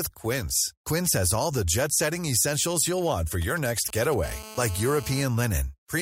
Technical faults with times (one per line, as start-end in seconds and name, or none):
3.42-4.14 GSM signalling bursts
4.23-5.23 GSM phone buzz